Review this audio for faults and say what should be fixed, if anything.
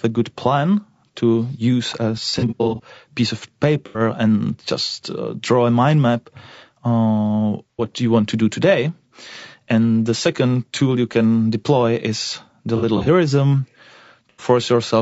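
The whole clip has a rough, grainy edge, with noise sitting between the voice harmonics and a synthetic top end. That's most likely low-delay AAC compression at a low bitrate, something like AAC-ELD around 32 kbps, where the short frames can't resolve pitch cleanly. Raising the call bitrate would clear that up.

There are several smeared, phasey patches from AAC frame loss with concealment. The decoder is papering over missing frames from the last good spectrum. The first runs from 2.30 to 2.81 s, between "plan to use a" and "piece of", scattered gaps with the longest run about 70 ms. The next is 3.86 to 4.00 s, just after "piece of". Then 7.71 to 7.85 s, between "a mind map uh" and "you want to do". Then 12.77 to 13.08 s, again scattered, and finally 14.29 to 14.44 s. Adding jitter buffering or forward error correction on the network path would prevent these.

From 8.63 to 12.13 s you get regular little ticks every 0.5 s, about seven of them. 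These are periodic USB or driver dropouts, where something blocks the audio path and roughly half a millisecond gets skipped each time. Tracking down the background task hogging the USB bus or driver would stop them.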